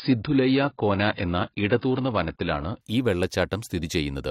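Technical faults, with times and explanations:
0.00–2.81 s, adaptive stream starting at a low bitrate: the speech sounds muffled, with nothing above 5 kHz, then clears abruptly with no gap, fitting a 16 kbit/s AAC start stepping up to 96 kbit/s.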